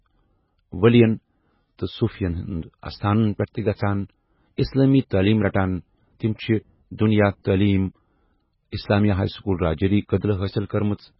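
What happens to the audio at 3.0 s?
At 3.0 s the speech has the heavy, watery, swirling sound of MP3 compression that runs through the whole clip. It is likely from a very low bitrate, around 16 kbps. A spectrogram would show a flat ceiling at 5.5 kHz and patches flickering on and off.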